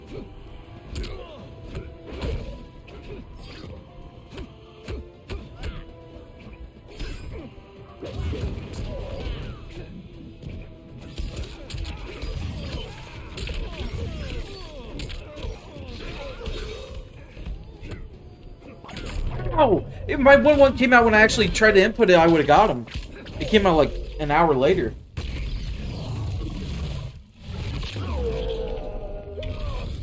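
No technical faults can be heard anywhere in the recording. Nothing breaks into the sound at any point, and it continues steadily to the end.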